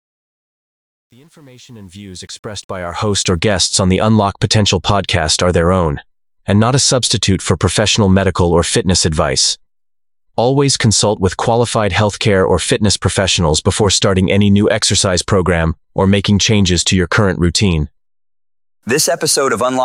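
Right at the start, from 0.0 to about 3.39 s, the fade-in has truncation distortion. Whatever stage applied the gain kept too few bits, sounding like roughly 9-bit resolution with no dither. At the lowest levels the waveform collapses into coarse square steps, so the quietest stretch, 0.0 to 2.32 s, is gritty. The fault ends by 3.39 s.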